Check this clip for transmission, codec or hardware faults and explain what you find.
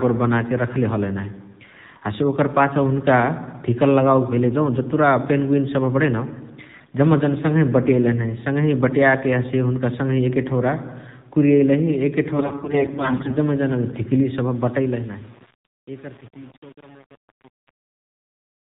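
Three faults are present: mobile codec damage throughout, two bursts of corrupted codec frames, and grainy distortion as the speech fades out.

AMR narrowband mobile codec, throughout: nothing above 4 kHz survives, and the buzzy, synthetic speech fits a low rate around 7.4 kbps. This is bandwidth and vocal-tract-model loss, unlike frame dropouts, which leave gaps.

AMR bit errors, 6.72–6.95 s and 12.34–13.36 s: flipped payload bits misplace the excitation pulses. Pitch and level hold, but the speech turns hoarse and gargly, worst in the longer, heavier second burst.

Truncation distortion on a fade, 14.4–18.8 s: the otherwise smooth fade-out is handled by an undithered stage, which fits about 7-bit resolution. The quiet tail turns gritty. Ordinary noise would stay smooth rather than break into steps.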